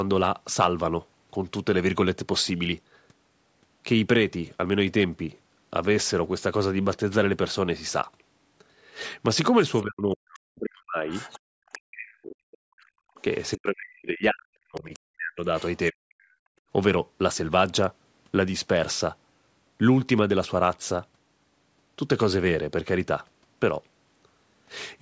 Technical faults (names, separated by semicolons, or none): speech suppressed in double talk; other side's voice leaking through; background gated by the echo canceller